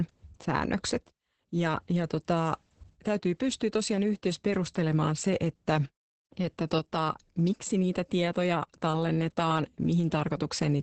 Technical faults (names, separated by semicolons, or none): Opus voice compression